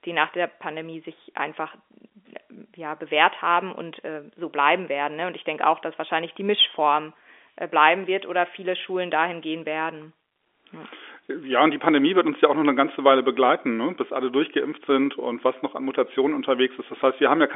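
No technical faults can be heard in this speech, which carries the narrow sound of G.711 telephone coding, with the line band running from 300 Hz to 3.5 kHz and nothing above 3.7 kHz, as fits a standard 64 kbps mu-law telephone channel.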